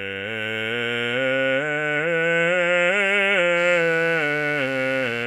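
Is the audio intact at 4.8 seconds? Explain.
No, at 4.8 seconds the music is carrying mains buzz, which comes in at 3.55 s and runs to the end of the clip. It's a 50 Hz interference problem, something like a dimmer, rectifier or poorly shielded lead spiking twice per mains cycle, so you get a whole ladder of harmonics stretching up into the kilohertz range. It sits roughly 25 dB under the music, a steady raspy buzz underneath everything.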